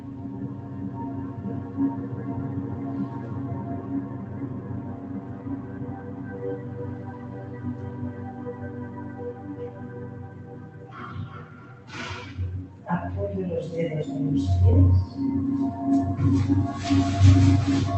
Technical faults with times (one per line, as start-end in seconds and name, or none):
0.00-17.97 noise suppressor applied to music or sounds